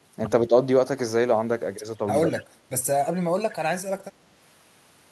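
At 0.47 to 0.53 s the speech dips briefly by a few decibels, then at 2.28 to 2.48 s it sinks much harder, by about 20 dB. This is likely speech suppressed in double talk, with the echo canceller turning down the near talker along with the other side. Between 2.34 and 2.43 s a faint copy of the speech trails 166 ms behind, about 20 dB below it. This is likely an echo leak, where loudspeaker sound the canceller failed to remove was sent back.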